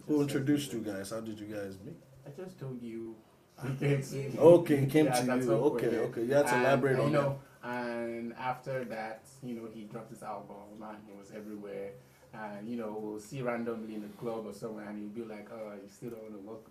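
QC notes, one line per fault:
3.01–3.08 s, short concealed packet loss. About 40 ms of audio arrived too late to decode. The receiver filled roughly 43 ms by extending the preceding sound, then crossfaded back to the real audio. The result is a brief smeared wobble.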